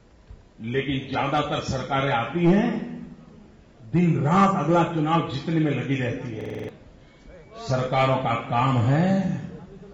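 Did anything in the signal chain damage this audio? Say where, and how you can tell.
Yes: a system hang loop at the driver/buffer stage. Between 6.41 and 6.69 s the host or driver stalled while the audio hardware kept replaying its ring buffer, so one 46.44 ms slice repeats exactly six times. This gives a machine-gun stutter at 21.5 Hz, a loop length that fits a 2048-sample buffer. The identical repeats are what set it apart from a dropout. About a third of a second of the original audio is lost.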